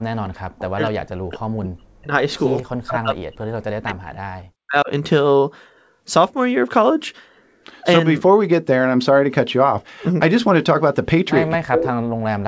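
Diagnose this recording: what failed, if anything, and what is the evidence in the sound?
Speech suppressed in double talk runs from 0.0 to 2.13 s, 2.83 to 3.45 s, 3.61 to 4.89 s and 11.55 s to the end. The speech drops by up to about 40 dB in chunks, likely because the call's echo canceller treated overlapping talk as echo and attenuated everything.

Echo leak appears at 2.57 to 2.63 s, about 30 dB below the speech, and at 11.75 to 11.86 s, a much louder copy only about 5 dB down. Both arrive 254 ms late, likely loudspeaker sound that the far end's echo canceller failed to remove.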